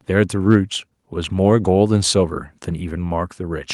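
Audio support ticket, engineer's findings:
Listened to the speech recording in full, and nothing stood out that would need further investigation.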